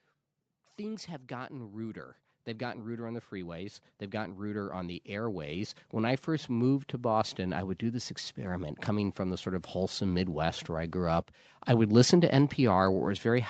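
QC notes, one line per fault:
0.76–11.05 s, automatic gain rising: gain control slowly lifts speech and background together by about 20 dB, ending before "up I would listen". Waveform envelope and spectrogram noise floor climb steadily.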